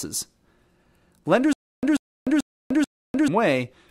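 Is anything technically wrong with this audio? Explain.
Yes, there's a stutter with silent gaps in this speech clip from about 1.53 s to 3.28 s. A short fragment of roughly 138 ms plays, then drops to dead digital silence for about 300 ms, and that cycle repeats four times on a steady 438 ms beat. The likely cause is the playback or stream stalling and replaying its last buffered chunk on each retry before running dry, so whatever should have been heard in that stretch is simply missing.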